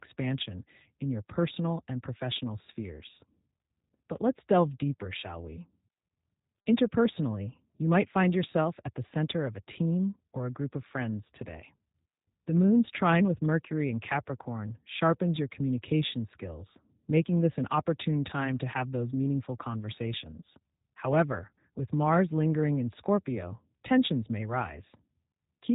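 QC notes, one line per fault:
Throughout, G.729 codec: the speech is rebuilt from a vocal tract filter, a pitch predictor and a few pulses per short frame, a coarse scheme whose roughness points to a rate of about 8 kbit/s. The sound is plainly rough and synthetic, with nothing above 3.8 kHz.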